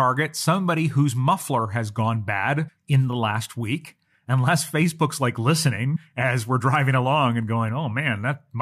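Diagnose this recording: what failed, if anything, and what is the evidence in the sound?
Compressed frames were skipped at the codec stage. At 2.67–2.69 s and 5.95–5.97 s the speech jumps ahead by around 200 ms and 100 ms, roughly seven and four 23.2 ms frames.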